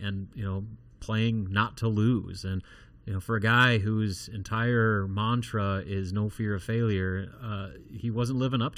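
From the very first moment to the end, the speech has that hollow, phasey quality of channel delay, or comb filtering. One channel is running about 0.7 ms behind the other, and when the two get folded to mono, the shared content cancels at regularly spaced frequencies. The first notch sits around 700 Hz, with more repeating up the spectrum.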